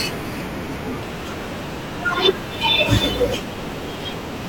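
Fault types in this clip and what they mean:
section at the wrong speed: likely a playback or edit clock mismatch runs the speech from 1.02 s to the end 1.18 times fast, lifting pitch about three semitones.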